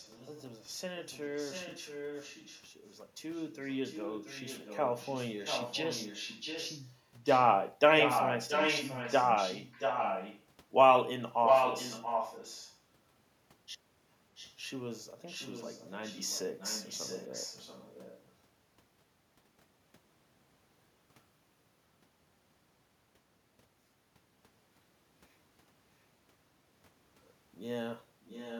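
A far-end echo canceller likely let loudspeaker pickup through in this speech clip, so an echo leak returns the voice 680 ms late at 0.0–0.44, 1.03–10.43, 11.45–12.78, 14.35–14.56, 15.26–18.31 and 28.24–28.6 s, ranging from faint to as loud as the speech.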